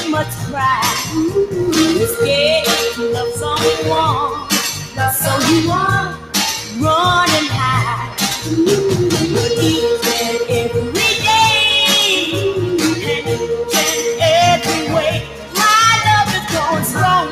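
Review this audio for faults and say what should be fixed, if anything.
A noise suppressor applied to music or sounds runs throughout. Built for speech, it treats sustained, steady material as noise and keeps pulling it down, so the level swings by around 5 dB. On a waveform the envelope bobs irregularly; a spectrogram shows sustained bands thinning in patches.

Sound cut by the noise suppressor occurs at 0.24–0.56 s, 4.8–4.99 s, 6.1–6.34 s and 15.21–15.56 s, with drops of about 7, 8, 9 and 9 dB. Here the suppressor judged the sound to be noise and attenuated it harder, so the waveform dips sharply and the spectrogram fades across those spans.

To prevent both faults, disable the speech noise suppressor, or switch to a music mode, whenever the source is not speech.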